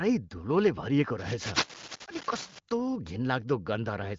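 A worn cable, connector or control was likely being moved between 1.18 and 2.59 s, so its contact resistance kept jumping and fed dense, irregular bursts of noise into the signal. The result is cable scratch noise: a rough scratching and rustling laid over the speech for about 1.4 seconds, fairly loud, close to the level of the speech itself. The scratching, like the speech, stops short of about 7.4 kHz, matching the AMR wideband (HD Voice) codec's band limit.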